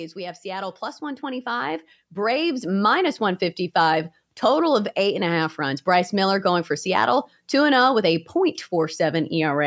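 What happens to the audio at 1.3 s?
At 1.3 s the automatic gain control is partway through raising its gain, a rise of about 12 dB spread from 0.14 to 3.12 s because it judged the input too quiet. Speech and background noise swell together, growing steadily louder through that stretch.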